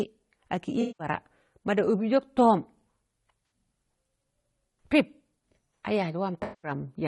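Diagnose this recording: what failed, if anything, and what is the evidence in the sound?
Codec stage: the speech is rough and grainy throughout, with noise between harmonics and a synthetic top band, likely low-delay AAC compression at a low bitrate near 32 kbps.

Network stage: AAC frame loss with concealment leaves smeared, noisy patches at 0.81–1.07 s, 3.45–3.51 s and 6.43–6.71 s, where the decoder rebuilt missing frames from earlier spectrum.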